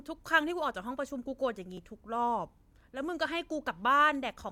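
Speech, with one repeated buffer fault at about 1.78 s. A tiny slice of audio plays twice in a row. Each copy lasts only about 1.33 ms, which fits a 64-sample buffer. New audio did not reach the output in time, so the device replayed the last block once. Because the block is so short, the result is a brief click rather than an audible stutter. The hard join at the repeat causes it. Essentially no audio is lost.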